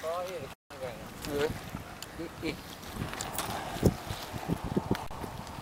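From 0.54 to 0.72 s, wireless packets most likely failed to reach the headphones in time, a Bluetooth dropout. The output falls silent for about 170 ms, and the sound returns further along, as though it had kept playing through the gap.

From 1.39 to 1.62 s, and again from 4.39 to 4.55 s, a worn or dirty contact is making and breaking as it shifts, which is loose connector crackle. The signal is chopped into an irregular burst of scratchy crackle.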